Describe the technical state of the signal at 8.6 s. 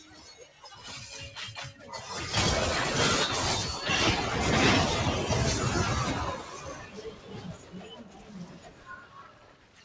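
At 8.6 s the sound is inside a stretch cut by the noise suppressor, running from 6.37 s to the end at 9.84 s. The suppressor mistakes this sound for noise and pulls it down by up to about 10 dB. Held parts and decays sink while sudden onsets still come through, which sets it apart from a plain level drop or dropout.

This sits on top of a noise suppressor applied to music or sounds across the whole clip. A suppressor built for speech keeps riding the level of steady tones and tails, with swings of around 15 dB. The result is pumping and thinning rather than the hard gaps of packet loss. The call path's band limit, with nothing above 8 kHz, also applies here.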